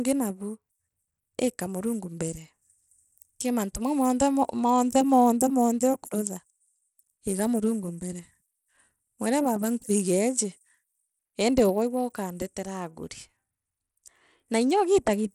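Throughout, the speech carries gritty, coarse noise and flickering treble, likely Bluetooth SBC compression at a low bitrate; a spectrogram shows patchy, blocky upper bands with no content above 20.7 kHz.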